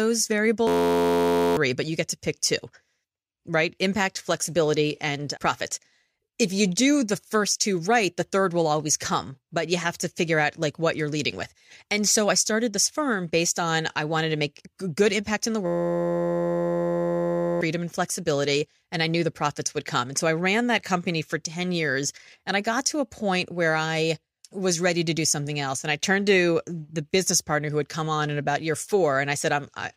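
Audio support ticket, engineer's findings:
System hang loop, 0.67–1.57 s: speech replaced by a steady 86.1 Hz buzz. One 11.61 ms slice repeats exactly, which fits a 512-sample ring buffer replayed while the host or driver froze. About a second of audio lost.

System hang loop, 15.66–17.61 s: same 86.1 Hz buzz and same 11.61 ms period, about two seconds lost. Unlike a dropout or packet-loss stutter, it has no silence or varied fragments, only one identical chunk at a fixed rate.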